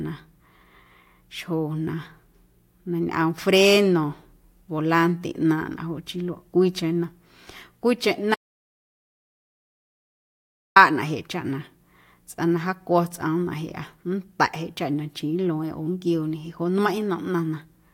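The input was likely lost from 8.35 to 10.76 s, leaving an audio dropout to silence: 2.41 s of silence cutting the speech mid-flow.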